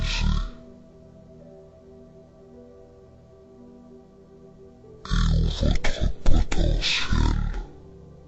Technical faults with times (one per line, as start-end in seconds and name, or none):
0.00-8.28 stereo read as mono